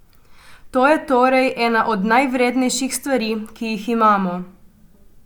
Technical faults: none

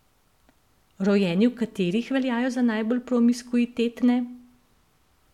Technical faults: none

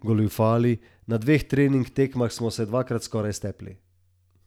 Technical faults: none

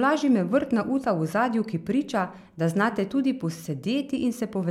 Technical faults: none

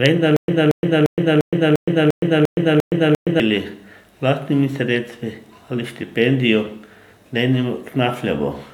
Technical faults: stutter with silent gaps

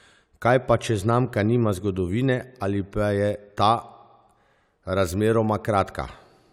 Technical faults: none

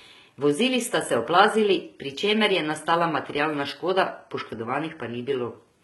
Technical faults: HE-AAC compression

